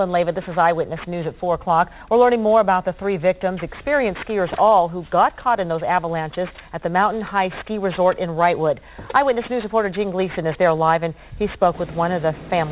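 The audio has aliasing from start to finish. High frequencies fold back around 4 kHz, which points to a drop from a 44.1 kHz rate to 8 kHz with no filtering first. The folded energy sits roughly 20 dB below the signal. Bright content sounds gritty and metallic.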